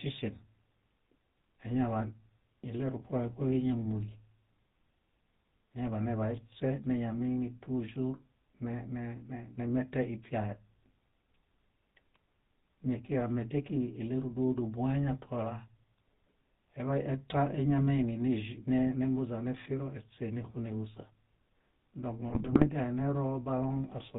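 From the start, the speech has the buzzy, gravelly roughness of the GSM full-rate codec, consistent with a 13 kbps stream. The codec rebuilds the voice from a vocal-tract model driven by regularly spaced pulses, and nothing above 4 kHz comes through. Unlike plain band-limiting, the grain sits inside the voice itself.

From 22.28 to 22.69 s, GSM bit errors take over. Corrupted filter, pitch and gain values reach the decoder, so each damaged frame bends the spectrum or jumps in level. The result is squawks, pops and gargling. Where packet loss would leave gaps or smeared repeats, here the sound turns garbled and erratic.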